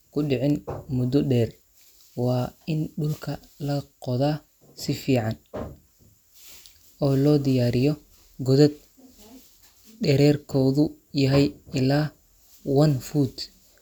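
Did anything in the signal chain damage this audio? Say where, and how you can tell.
No, nothing in the signal chain audibly damaged this speech recording. Listening through it, no stage shows anything that would point to trouble.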